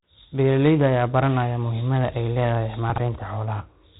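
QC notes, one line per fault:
throughout: 4-bit ADPCM compression. Each sample is coded as a coarse 4-bit step from a predicted value, so the quantisation error becomes broadband noise that rises and falls with the speech. It is heard as a gritty hiss riding on every loud syllable, and as roughness on sharp onsets where the adaptive step lags. The damage is heavy, which fits about 32 kbps. Nothing remains above 3.9 kHz, so the speech also sounds dull and muffled.
2.90–2.98 s: chunks out of order. For 80 ms the audio plays in the wrong sequence. A 20 ms piece turns up late, after material that should follow it, which fits a delay of about three chunks. Nothing is missing, but the reordering produces a brief jumbled, garbled moment.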